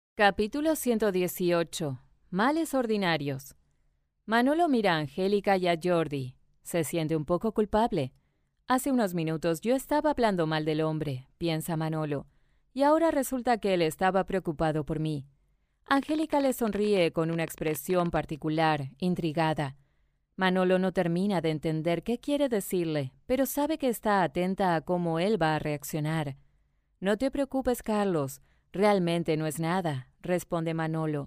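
A speech recording carries a train of clicks from 15.97 to 18.17 s. The clicks arrive at about 15.5 per second, but the spacing is uneven rather than steady. There are around forty of them over those two seconds. Each one is much the same short pop. They peak a few decibels above the speech and tick through any pauses too. The likely cause is interference from nearby equipment or a faulty connection or power supply.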